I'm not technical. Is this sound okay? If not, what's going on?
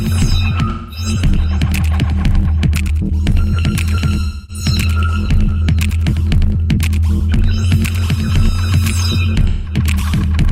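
No. At 0.69 to 1.06 s, 4.24 to 4.64 s and 9.48 to 9.76 s the sound turns briefly smeared and hazy. This is AAC frame loss with concealment: small chunks of the compressed audio went missing, and the player patched each gap by guessing from the sound just before.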